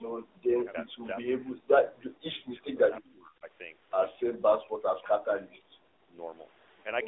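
AMR narrowband mobile codec damage runs through the whole speech clip. The signal is confined to a telephone band of roughly 300 Hz to 3.6 kHz, with nothing above 3.8 kHz. The coder rebuilds each 20 ms frame from a vocal-tract model excited by a few pulses. At this clip's bitrate, which sounds like something near 10 kbps, that model is plainly audible: the voice is buzzy, synthetic and muffled.

From 0.84 to 3.47 s, the speech is suppressed in double talk. Within that stretch the voice sinks, dulls and drops out in patches, at its deepest by something like 40 dB. The affected portions add up to around two seconds. This is likely an echo canceller that could not tell the near talker apart from loudspeaker echo while both sides spoke, and so it pulled everything down together.

From 3.04 to 3.12 s, an echo leak slips through. It is a brief, faint, delayed copy of the speech, trailing the original by about 0.36 s and sitting roughly 25 dB below it. 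It is likely residue from a far end on loudspeaker whose echo canceller failed to remove all of what its microphone captured, so a scrap was sent back down the line.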